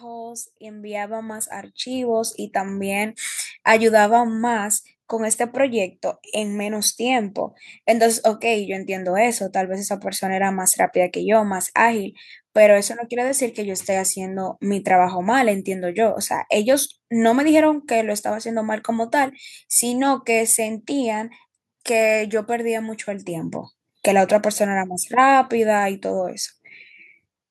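Automatic gain rising runs from 0.05 to 3.27 s: the gain control judged the incoming speech too quiet and raised its level gradually, by about 13 dB, so the voice and the background noise swell together over those three seconds instead of holding steady.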